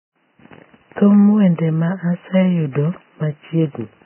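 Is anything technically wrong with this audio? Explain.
Yes. Vorbis compression, heavy, runs through the whole clip. Nothing in the speech reaches above about 3.1 kHz, and the band just below that edge sounds hissy and grainy. This is likely the result of Vorbis coding at a very low rate, roughly 10 kbps. To save bits, the encoder drops everything above that cut-off and quantises the remaining treble so coarsely that fine detail becomes noise of similar energy. The voice sounds dull and roughened, with consonant onsets smeared.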